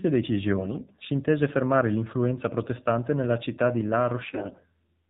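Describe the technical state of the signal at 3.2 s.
AMR narrowband mobile codec damage is present at 3.2 s, as it is across the whole clip. The speech has been squeezed through an 8 kHz vocal-tract model, so nothing above 4 kHz survives, and the plainly buzzy, synthetic texture fits a low 7.4 kbps mode.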